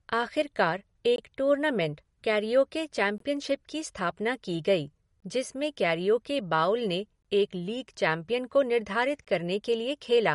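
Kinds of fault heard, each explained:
MP3 compression: The treble stops sharply at 11.2 kHz. The speech sounds watery and swirly, with smeared attacks and chirpy s sounds. This plainly audible damage likely comes from an MP3 encoder short of bits, and fits a rate near 48 kbps.
Gap between chunks: Short silent holes cut the speech every 2 seconds. Each lasts about 21 ms, at 1.16, 3.18, 5.20, 7.22 and 9.25 s. One falls just before "टूर्नामेंट कैरिओके". The sound resumes intact after each hole.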